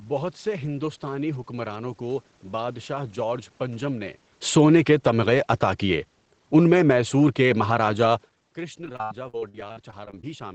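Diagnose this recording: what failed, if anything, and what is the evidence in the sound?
The call's automatic gain falling cut level by about 5 dB at 4.41–5.12 s, just after "بادشاہ جارج پنجم نے", and again at 5.9–8.3 s, sinking speech and background together.

Repeated packet loss (robotic sound) at the network and jitter buffer, 8.84–10.24 s: about 28% of that stretch is concealed with repeated sound, leaving it choppy and robotic.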